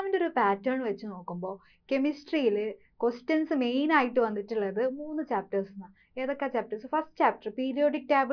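No technical fault can be heard anywhere in the clip; the signal stays continuous and stable throughout.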